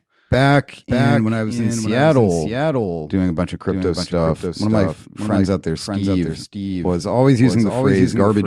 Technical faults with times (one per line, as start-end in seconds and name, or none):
0.00-8.47 doubled audio track